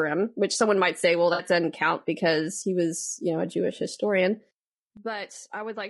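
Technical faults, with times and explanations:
Throughout: low-delay AAC compression. The speech sounds rough and grainy, with noise filling the gaps between harmonics and a thin, synthetic top band. This is likely a low-delay AAC codec. Its short frames resolve pitch poorly, and the damage fits a bitrate near 32 kbps.
1.33 to 1.43 s: AAC frame loss with concealment. Right after "someone might say well", about 60 ms of audio smears into a noisy, phasey patch before "doesn't count because he". This fits roughly three lost frames, rebuilt by the decoder from the last good spectrum.
4.97 s to the end: sudden gain jump. The level drops by about 12 dB in a single step, and the speech and background noise fall together with no fade. This is likely a digital gain change applied at once rather than ramped.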